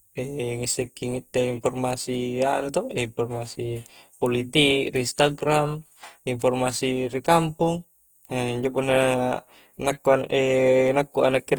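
Speech with a grainy, rough, noisy texture throughout, likely from Opus compression in its CELT music mode at a rate near 24 kbps, despite full bandwidth to about 20.2 kHz.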